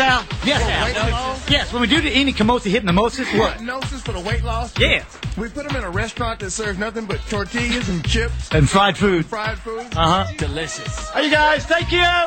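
No technical faults can be heard anywhere in the clip. There is nothing in the audio that calls for a fix.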